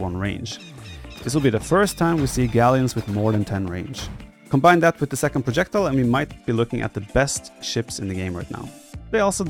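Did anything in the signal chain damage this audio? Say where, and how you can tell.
Yes. From 1.83 to 6.36 s a gritty, inharmonic fizz, roughly 30 dB below the signal, rides on loud and bright passages. This is crude rate conversion at the sample-rate conversion stage: samples repeated without filtering, consistent with a 44.1 to 48 kHz change.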